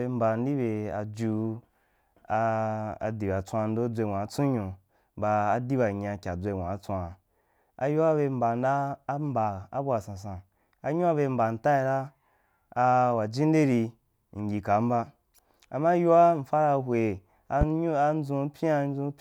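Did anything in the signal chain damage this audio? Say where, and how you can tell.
Yes. A single sharp pop lands at 17.61 to 17.65 s, standing out well above the speech, which carries on beneath it. This loud pop is likely a voltage spike in the analogue wiring, from a plug, switch or static discharge, added straight onto the signal.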